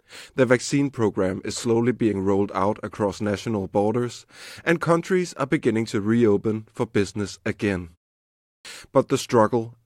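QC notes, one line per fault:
8.55–8.65 s, clipped start after a pause: after a 0.67 s gap, the sound resumes abruptly with its opening missing. About 98 ms is lost. The output device dozed off in the silence and had not woken fully when the sound returned.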